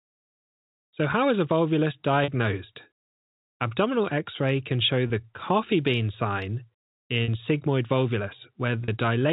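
Speech over what sounds like G.711 telephone coding, so nothing above 4 kHz. There's packet loss with pitch repetition: brief held, buzzy moments at 2.24 s after "how is a volvulus", at 5.08 s between "x ray can show" and "coffee bean sign", and at 7.24 and 8.84 s. Each gap runs 40 ms except the 20 ms one at 5.08 s, and the receiver papers over it by looping the last pitch period.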